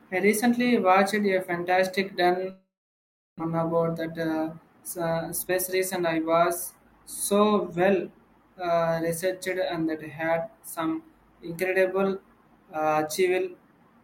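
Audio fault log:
2.50–3.41 s, long network dropout: the sound stops and the gap is filled for about 0.89 s, first with a fading buzz continuing the last sound, then silence for about 0.71 s. This is likely a network dropout. The audio resumes with about 0.5 s never played.
5.10–8.28 s, jitter buffer speed-up: speech runs about 111% fast at unchanged pitch and sounds hurried. The receiver was holding excess buffered audio and trimmed it by repeatedly cutting short pitch-period pieces, removing around 0.4 s to reduce delay.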